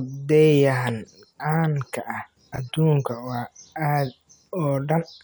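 Just after "ka ah", at about 2.54 to 2.58 s, the speech stumbles in a brief jumbled flicker. This is chunks out of order: one 20 ms piece of audio arrived late and was played one chunk after the piece that should follow it. No sound is missing, but the swapped order creates three abrupt joins where the waveform jumps, which produces the garbled moment.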